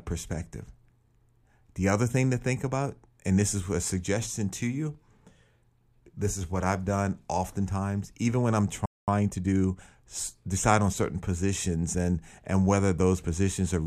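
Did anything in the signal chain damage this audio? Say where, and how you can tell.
Yes. The damage is at playback. The speech halts after "oftentimes even when I'm" at 8.86 s. Silence lasts about 220 ms, to 9.08 s. This is a playback stall, likely from the player running short of data or its thread being blocked.

Time-compressed catch-up follows, also in the player. From 9.08 to 9.96 s the speech runs 1.25 times fast at unchanged pitch. It settles before "decide on certain positions". Small pieces are cut and cross-faded to drain the backlog.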